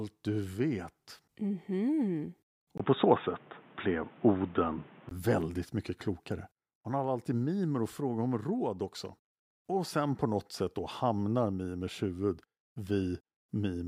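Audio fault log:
2.78–5.11 s, input switched to a poorer device: after a brief gap of about 20 ms the sound turns dull and boxy, with nothing above 3.8 kHz, a level shift of roughly 5 dB, and a new, quiet background noise, until full bandwidth returns just before "väldigt mycket klokare". This is likely a switch to another microphone or headset profile. A codec or filter cutting the top would not bring its own noise floor, level step and switching gap.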